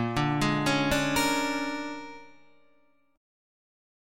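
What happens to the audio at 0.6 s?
Nothing goes wrong at 0.6 s; the audio carries on intact through that moment with no audible fault.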